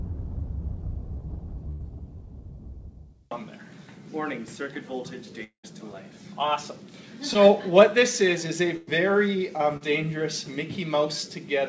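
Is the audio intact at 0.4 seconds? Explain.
Yes, the audio is intact at 0.4 seconds, with no dropout, glitch or other fault at that moment.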